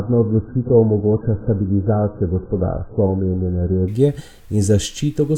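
Adaptive stream starting at a low bitrate, 0 to 3.88 s: the player began on a thin version with nothing above 1.7 kHz, then upgraded without a gap.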